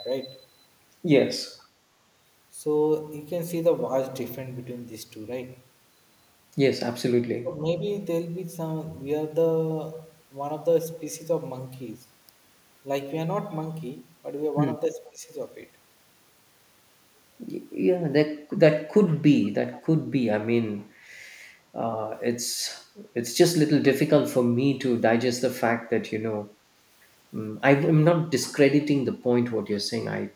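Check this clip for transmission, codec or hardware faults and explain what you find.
Two kinds of trouble here: a faint echo leak in five spots, and the speech suppressed in double talk twice.

Echo leak at 1.59–1.67, 19.10–19.16, 19.44–19.49, 19.73–19.81 and 29.08–29.23 s: faint scraps repeat about 465 ms late, likely loudspeaker pickup slipping past the far end's echo canceller.

Speech suppressed in double talk at 7.42–7.59 and 15.09–15.29 s: the speech briefly dips by about 15 dB, likely the canceller ducking the talker while both sides overlap.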